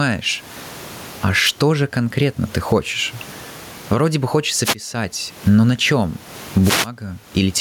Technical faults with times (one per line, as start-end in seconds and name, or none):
0.00-7.61 gain pumping